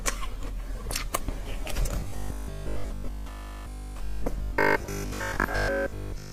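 From 2.00 to 6.32 s the audio has robotic sound from repeated short buffers, a rigid 50 Hz buzz, likely from a 20 ms block replayed for most of that stretch.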